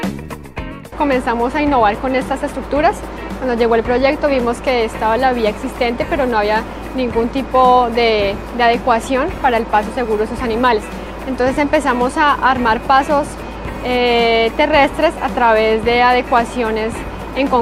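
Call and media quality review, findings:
No faults found on listening.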